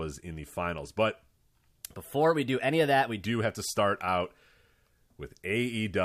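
A speech recording with a section at the wrong speed from 1.85 to 3.25 s, just before "have to start out". Playback there runs about 1.12 times too fast, so the sound is hurried and raised by about two semitones, then snaps back to normal. Because tempo and pitch shift together, this is a speed error rather than a pitch shifter or time-stretch, which would alter only one of the two. The likely cause is a segment clocked at the wrong rate during editing or playback.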